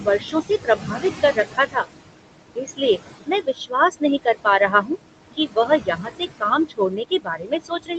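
Speech recording in which the background sinks in the gaps and swells back under the talking: these are noise suppressor artifacts, from frame-by-frame band gating that pulls steady noise down by about 20 dB. The room noise, sitting about 10 dB below the speech, is what gets pumped this way. Quiet consonants and word tails sound swallowed or faint from 0.0 to 1.85 s, 2.56 to 4.92 s and 5.37 s to the end. In each of the first two stretches, a little under a second of speech is affected in total. This is speech cut by the noise suppressor, which mistook soft speech for noise and lowered it by up to about 16, 19 and 20 dB respectively. The call path's Opus codec stops everything above 8 kHz.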